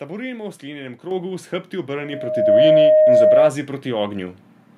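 At 1.11 s, between "v sklenjenem" and "s hrbti", the microphone volume is stepped up by about 6 dB: the input gain on the capture device was raised in a single jump, so the speech and the background noise get louder together. At 2.13 s a second step adds about 3 dB more.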